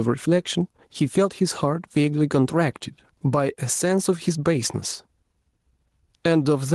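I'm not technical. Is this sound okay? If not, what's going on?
No. Gain pumping runs throughout: loud and soft parts end up closer in level and the sound is squashed, most likely from the level being set too high and pulled down by a fast limiter.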